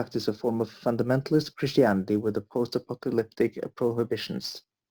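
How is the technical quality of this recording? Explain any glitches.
The recording has one fault, running throughout: sample clock jitter. The converter's clock wobbles by something like 7 microseconds, so fast-moving parts of the speech get mistimed, adding a gritty hiss roughly 30 dB down that swells on loud, bright syllables and drops away in pauses.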